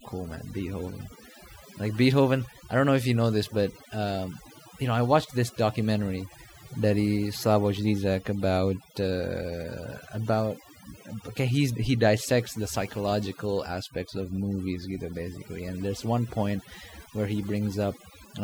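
Across the whole clip, a noise reduction stage set far too aggressively shows overdone noise removal, switching off frequency bands that come close to its noise estimate. Gaps between phrases drop to near silence with twinkling specks, and quieter parts of the speech vanish with them.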